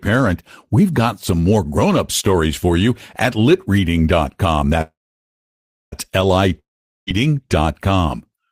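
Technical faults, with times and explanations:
4.81 to 5.94 s, call audio freeze: the sound stops moving forward and the last fragment is stretched into a brief fading buzz, then about 0.99 s of near silence. The likely cause is packets held up in transit, so the jitter buffer ran dry and the receiver had to improvise filler for about 1.1 s. When the packets arrived, the speech carried on exactly where it had paused, so nothing is lost, but everything after it now sits about 1.1 s later.
6.59 to 7.09 s, long network dropout: again the last sound smears into a short decaying hiss and then about 0.44 s of silence fills the gap, but this time the speech returns further along rather than where it broke off. About 0.48 s of the speech never plays at all. That points to the likely cause being a stretch of audio that never reached the receiver, which concealed the hole for about 0.48 s and then simply moved on.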